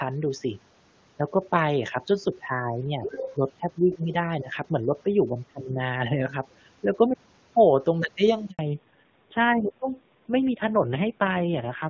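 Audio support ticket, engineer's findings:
Other side's voice leaking through, 3.03 to 3.35 s. Echo canceller likely left residual loudspeaker echo in the mic path. A second voice is audible under the talker for about a third of a second, roughly 10 dB below the main speech.

Speech suppressed in double talk, 4.41 to 4.49 s and 5.46 to 5.79 s. Echo suppressor likely misread overlapping talk as echo and attenuated both. First event is a brief shallow dip of around 10 dB. Second is deeper, around 25 dB, with the talker suppressed for roughly 300 ms.

Handover gap, 8.51 to 8.59 s. Call moved between networks and no speech frames arrived during the switch. Voice drops out within milliseconds and stays silent for 80 ms. Content spoken in that window is gone.

Fallback to narrowband, 8.59 s to end of clip. After the handover the call renegotiated from HD Voice down to a narrowband codec, consistent with AMR-WB at 23.85 kbit/s falling back to AMR-NB at 5.9 kbit/s. 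Nothing above 4 kHz remains, and the voice turns duller and rougher.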